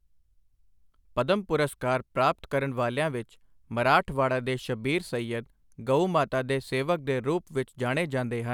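Nothing technically wrong turns up in this bit of speech; there are no faults to point to anywhere in it.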